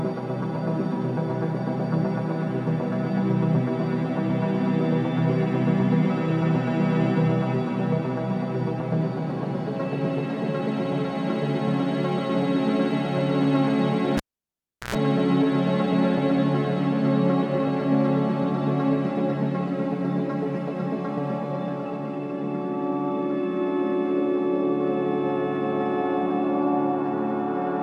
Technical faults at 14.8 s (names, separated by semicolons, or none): cable pulled and plugged in